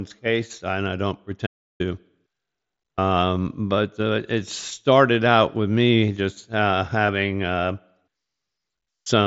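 At 1.47 s, just after "and I don't", an audio dropout to silence cuts the sound to silence for 333 ms until 1.80 s, likely from a momentary input loss. Between 7.03 and 7.09 s, after "with me just uh", concealed Bluetooth headset packet loss leaves a brief buzzy repetition and slight warble, with short losses scattered over 60 ms and patched from preceding waveform.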